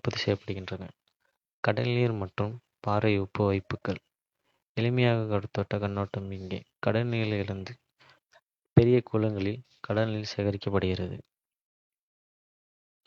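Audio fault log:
No faults heard anywhere in the speech recording; nothing to log.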